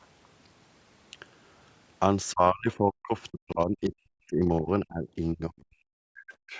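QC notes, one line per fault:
2.32–3.14 s and 3.30–6.58 s, speech suppressed in double talk: the speech is turned down, by about 35 dB in the first stretch and about 40 dB in the second, which lasts about three seconds. This is likely an echo canceller unable to separate the near-end talker from the loudspeaker echo and attenuating both.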